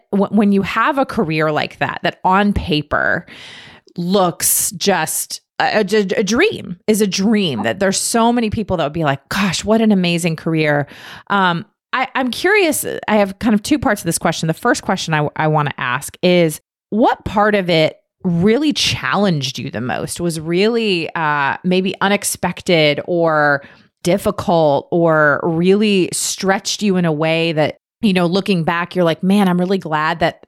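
No technical faults can be heard anywhere in the speech.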